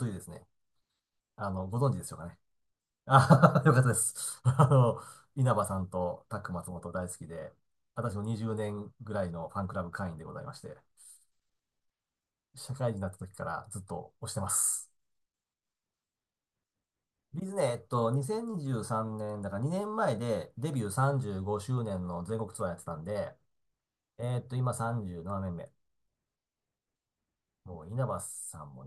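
Across the whole speech recording, nothing audible points to a technical fault in the signal.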